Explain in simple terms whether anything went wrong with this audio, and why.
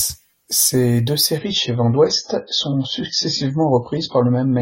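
From 1.38 s, the speech abruptly turns dull and watery, with no gap. This is an adaptive stream at a lower bitrate, which switched down after the connection slowed.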